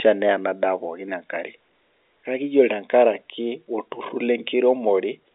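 Nothing goes wrong anywhere in this bit of speech, which simply comes over a normal G.711 telephone line with its usual narrow band of roughly 250 Hz to 3.6 kHz.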